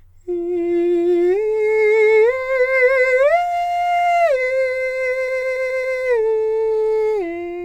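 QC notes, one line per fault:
5.27–5.97 s, repeated frames: the music stutters as one 139 ms block plays five extra times, duplicated compressed frames decoding again and adding 0.7 s.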